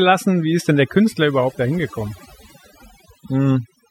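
From start to finish the speech shows overdone noise removal: a noise reduction stage set far too aggressively on a noisy source. Any frequency band sitting close to the estimated noise floor is pulled right down or switched off, and the quieter components of the voice are removed along with the noise. Between phrases the background collapses to near silence scattered with twinkling, chirpy specks.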